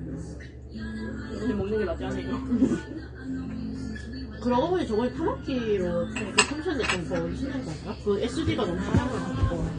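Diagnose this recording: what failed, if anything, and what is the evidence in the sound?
The codec stage is where this went wrong, and AAC compression is the likely culprit. From start to finish nothing survives above 9.7 kHz, and the damage is plainly audible: a dull, smeared top with a warbly, fizzy texture. That fits AAC-LC squeezed to around 32 kbps.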